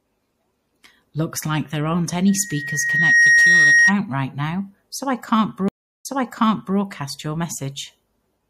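Throughout the speech the audio sounds watery and swirly, with chirpy, metallic s sounds and softened consonant attacks. This is likely MP3 compression at a bitrate low enough to fit around 64 kbps. The encoder drops weak spectral lines that flicker on and off between frames. On a spectrogram this appears as speckled holes and islands in the energy.

From 2.28 s to 3.95 s a loudspeaker feedback squeal rises over the audio. A single tone at 1.9 kHz swells for roughly a second until it sits about 10 dB above the speech, then stops. The microphone picked up the loudspeaker it feeds, and at that one frequency the loop gain passed unity, so the tone fed on itself. A spectrogram shows one bright horizontal line that grows brighter, and the waveform's envelope swells.

At 5.68 s a stream reconnect breaks the audio, and the disturbance lasts until 6.78 s. The connection dropped, leaving 0.36 s of silence. 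When it came back, a fresh decoder picked up the stream about 0.73 s earlier than where it broke, so a short stretch of speech plays twice and the restart fades in. The waveform shows a flat gap followed by a soft onset. On the spectrogram a blank vertical band separates repeated patterns.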